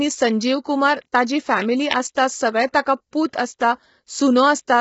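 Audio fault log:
Throughout: low-delay AAC compression. The speech sounds rough and grainy, with a hissy fill between the pitch harmonics and a dulled top end that stops near 7.7 kHz. This is likely AAC-ELD at a low rate, around 16 kbps: its short frames blur harmonic detail and leave too few bits, so noise fills the gaps. On a spectrogram the harmonic stripes look smeared and speckled, with a hard ceiling at about 7.7 kHz.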